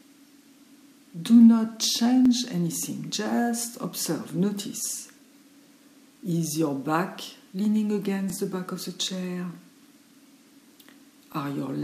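A stutter sounds at 2.26 to 2.28 s, again at 8.30 to 8.32 s, and again at 11.32 to 11.35 s. These are overlapping chunks. The audio was handled in 3.0-second chunks, and each new chunk began before the previous one ended. At each join, a 23 ms slice plays twice. The doubled slice is too short to hear as an echo. It comes through as a brief click or hiccup.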